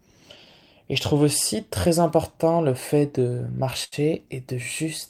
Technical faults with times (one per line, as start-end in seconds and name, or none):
2.87-3.94 repeated stalls (stutter)